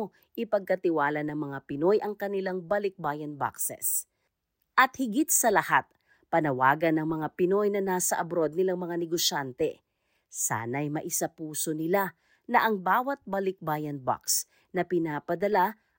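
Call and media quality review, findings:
No faults found in this speech recording. Nothing on the call or media path calls for follow-up.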